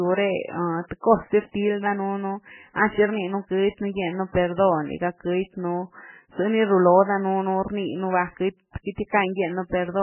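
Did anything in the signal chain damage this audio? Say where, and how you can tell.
Yes, at the codec stage, where the speech was likely squeezed through MP3 compression at a very low bitrate, which fits something near 8 kbps. Starved of bits, the encoder cut everything above 3 kHz and zeroed the weaker frequency lines, letting them flicker on and off from frame to frame. The whole clip sounds dull and band-limited, with a heavy watery, swirling texture, metallic chirps on the s sounds, and smeared consonant attacks.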